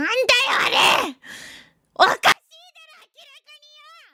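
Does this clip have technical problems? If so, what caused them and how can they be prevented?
Yes. From 2.32 s to the end, the sound drops by about 36 dB to a faint residue. This is likely one channel inverted: with one stereo side's polarity reversed, the shared content cancels when the channels are summed to mono. Prevent it by checking polarity and mono compatibility on every channel before export.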